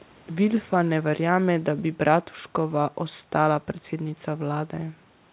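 No technical faults occur in this speech; the band-limiting to 4 kHz heard throughout simply reflects the G.711 call path it passed through.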